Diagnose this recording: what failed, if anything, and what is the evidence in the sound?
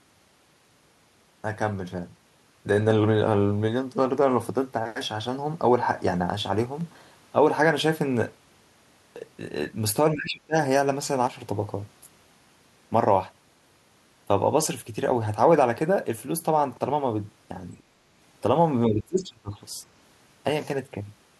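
Speech suppressed in double talk, 10.14–10.56 s and 18.87–19.57 s: the speech dips by around 25 to 30 dB, likely from call-processing echo cancellation ducking during simultaneous talk.

One channel drops out at 11.27–11.40 s: the level falls abruptly by about 6 dB, likely a lost stereo channel at the driver stage, halving the mono sum.

Other side's voice leaking through at 17.78–17.83 s: a brief faint scrap of a second voice, some 35 dB below the speech, likely residual loudspeaker echo the canceller missed.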